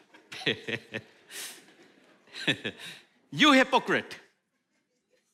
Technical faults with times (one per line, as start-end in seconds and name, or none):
none